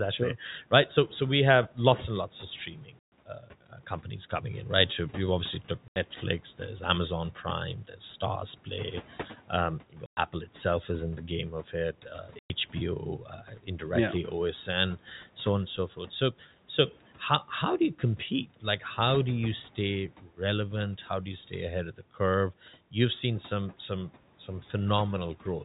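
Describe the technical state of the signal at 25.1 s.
At 25.1 s the signal is intact, with no technical fault audible at that moment.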